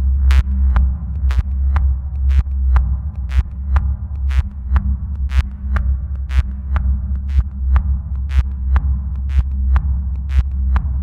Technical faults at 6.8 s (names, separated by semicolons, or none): none